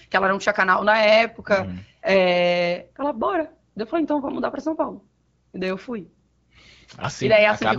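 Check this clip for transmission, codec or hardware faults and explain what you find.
No transmission, codec or hardware faults can be heard in the speech. It carries the light, clear character of AMR wideband (HD Voice) coding, with a band limit near 7 kHz and no raspiness, which fits a rate of 12.65 kbit/s.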